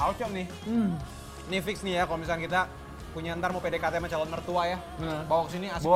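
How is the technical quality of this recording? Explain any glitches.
The technical quality of this recording is sound, with no glitches to explain.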